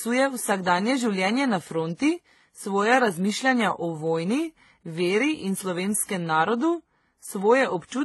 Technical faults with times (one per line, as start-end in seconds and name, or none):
0.00-8.05 transcoding between lossy codecs